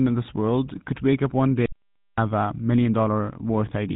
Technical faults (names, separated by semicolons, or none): GSM full-rate codec; audio dropout to silence